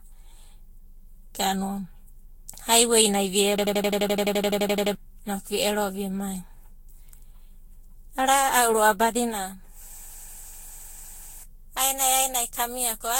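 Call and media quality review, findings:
Generation loss, whole clip: swirly, smeared, hollow speech with blurred attacks and nothing above 16.6 kHz. Likely cause is repeated lossy re-encoding, roughly seven passes. The character points to Vorbis near 62 to 66 kbit/s, with quantisation noise and spectral holes stacking on shifting frame grids.

System hang loop, 3.58 to 4.95 s, after "haiwei nai vi" and before "inoku vi ero vimai": machine-gun stutter at 11.7 Hz, an 85 ms slice repeating 16 times, fitting a 4096-sample ring buffer. Driver or host froze while the output replayed its buffer. About 1.5 s of audio lost.

System hang loop, 9.98 to 11.44 s, after "ro'ava badina": same 85 ms stutter at 11.7 Hz, 17 repeats, same buffer size and mechanism. About 1.5 s lost.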